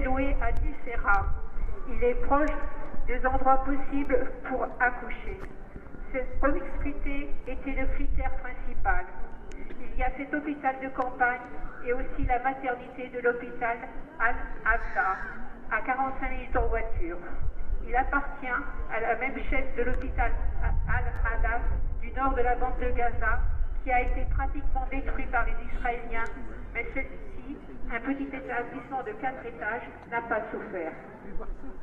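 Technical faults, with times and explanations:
0.57 s, 4.05 s and 21.16 to 21.18 s, repeated buffer: new audio did not reach the output in time, so the device replayed the block it already held, once at 0.57 and 4.05 s and twice in a row at 21.16 s. Each replayed stretch is only about 10 ms long, which fits a 10 ms buffer, so it is heard as a brief click or buzz rather than a stutter. No audio goes missing; the sound just runs slightly late after each repeat.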